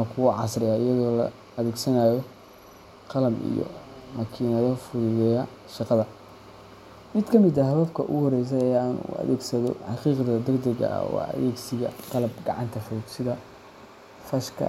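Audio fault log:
No audible faults were found in this speech recording.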